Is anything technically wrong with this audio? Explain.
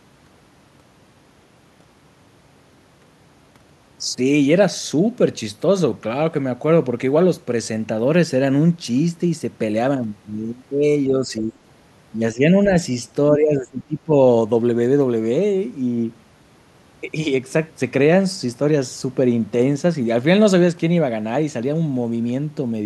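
Yes. The speech is pulled down in level at 11.09–11.5 s, 12.34–12.43 s, 12.64–12.7 s and 13.32–14.12 s. The first three are shallow dips of roughly 5 dB. The last is deeper, close to 20 dB, so the speech nearly drops out for most of a second. This pattern is likely speech suppressed in double talk: with both ends talking at once, the echo canceller mistook the near-end speech for loudspeaker echo and attenuated it along with the echo.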